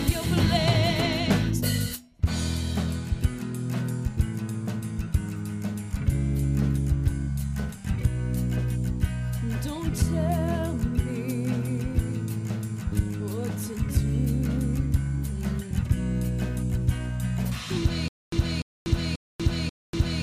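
At 18.08 s the sound turns into a stutter with silent gaps that lasts to the end. A 296 ms burst repeats four times, every 537 ms, with 241 ms of dead silence between. The player likely stalled and replayed its last fragment, losing the audio in between.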